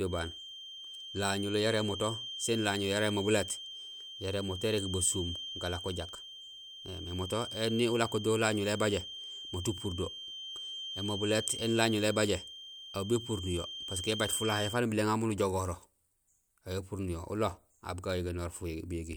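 A feedback whistle runs from 0.00 to 14.83 s: a thin, steady 3.2 kHz tone sitting roughly ten decibels beneath the speech, wavering slightly in level. A loudspeaker-to-microphone loop likely sat right at the feedback threshold, sustaining that one frequency without escalating.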